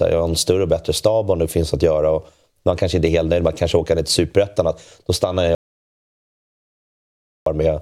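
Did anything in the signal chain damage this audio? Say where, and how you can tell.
Yes. An audio dropout to silence hits the speech from 5.55 s to 7.46 s, about 1.9 s where the signal falls to silence with no room tone underneath, then resumes abruptly. A dead-silent gap rather than a quiet passage points to the input side: the likely cause is a lost connection or mute between source and recorder while the recorder kept writing samples. Whatever was spoken in that span is unrecoverable.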